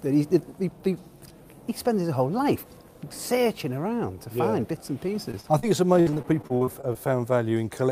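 The audio loses data in transit twice. First come three instances of short concealed packet loss, at 5.31 s, 5.41 s and 5.59 s, where about 20 ms, 20 ms and then 40 ms of the stream failed to arrive in time. The receiver extended the preceding sound across each hole and crossfaded back into the real signal, so each spot is heard as a quick smear or wobble. Then, from 6.01 to 6.97 s, the damage becomes repeated packet loss with a robotic sound. Ten gaps land within under a second, the longest about 56 ms, and roughly a quarter of that stretch is synthesised rather than received. Because each patch follows closely on the last, the concealment never fully recovers, and the sound turns choppy, with fragments missing between the filled sections.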